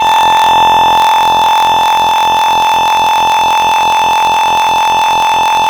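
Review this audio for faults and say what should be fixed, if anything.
There's a block size mismatch (truncated) running through the whole music clip. You can hear a steady buzz at about 43.1 Hz, and the music moves along roughly 1.12 times too fast while its timbre stays about where it should be. One stage is handing over longer blocks than the next stage takes, so the tail of every block gets dropped. That chopping makes the buzz, and the missing pieces make the speed-up. The buzz rate fits a 1024-sample read block. To prevent it, make the writing and reading stages agree on block size, or put a proper buffer between them so nothing gets discarded.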